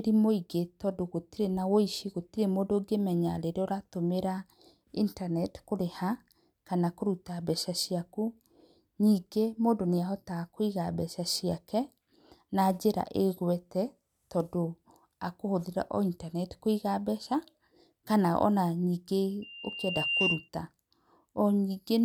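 From 19.42 to 20.49 s, loudspeaker feedback squeal: the microphone re-captures its own loudspeaker, and at 2.8 kHz the loop gain tops one. The tone swells over roughly three quarters of a second to a few dB above the speech, appearing as a brightening horizontal spectrogram line and a growing waveform envelope.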